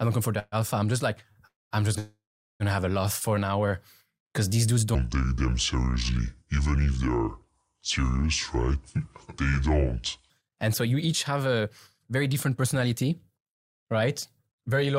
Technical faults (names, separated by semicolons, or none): call audio freeze; short stall from a late packet; section at the wrong speed; jitter buffer speed-up